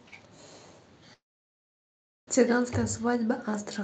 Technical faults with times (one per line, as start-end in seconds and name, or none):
1.13-2.29 long network dropout